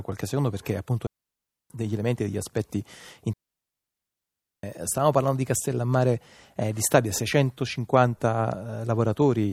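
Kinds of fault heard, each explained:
Digital wireless dropout: the receiver lost too much data and muted, leaving clean near-silent holes of 0.64 s after "qualche secondo perché appunto" and 1.3 s at 3.33 s, with no noise bursts.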